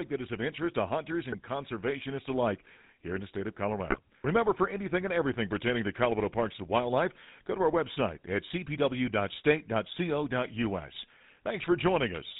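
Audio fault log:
throughout GSM full-rate codec: The speech went through the original GSM coder, which fits a 13 kbps full-rate link. It models the vocal tract with a filter and rebuilds the excitation from regularly spaced pulses, keeping only every third sample. Nothing above 4 kHz survives. The damage is plainly audible as a buzzy, gravelly roughness over the voice, and the top of the band is cut away.
1.32 to 1.37 s and 3.90 to 3.99 s GSM bit errors: In these two bursts, corrupted bits reached the speech decoder. The bad bits hit the transmitted filter, pitch or gain values, so the decoder rebuilt the sound from wrong parameters. The spectrum bends out of shape or the level jumps for as long as the errors last. The first burst lasts about 44 ms. The second lasts about 90 ms and points to a worse error rate spread over several frames.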